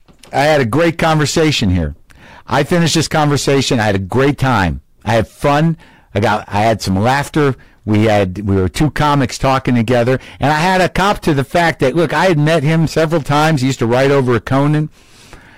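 Hard clipping runs through the whole speech clip. The level is driven about 10 dB too hot, so around a sixth of samples hit the ceiling. Loud syllables turn to harsh fuzz.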